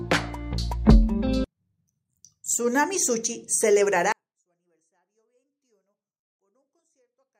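At 4.12 s the level collapses by about 48 dB in a single step and stays there to the end: a 24-bit alignment error, leaving the sound too quiet. Samples packed into the low bytes of a 32-bit word are being read as full 32-bit integers, so every value shrinks by a fixed factor. Unlike a dropout or muting, the sound is still there, clean and undistorted, just barely audible, and unlike a fade the drop is instant.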